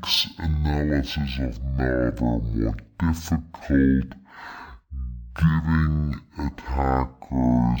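From start to end, the stereo stream was read as mono: the player took the interleaved left and right samples as one continuous channel, so every pair of samples is played in sequence instead of side by side. That doubles the time each moment of the speech takes, so it runs at half speed and drops a full octave, 12 semitones, giving a slow, deep, dragging delivery, with a fainter mirrored copy of the sound in the upper half of the spectrum.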